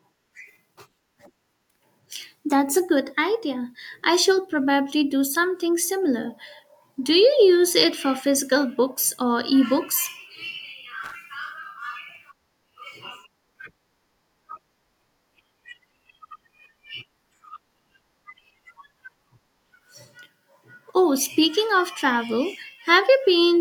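At 11.04 to 11.15 s, loose connector crackle: a worn contact breaking intermittently chops the speech into scratchy bursts, seen as ragged gaps and broadband vertical streaks.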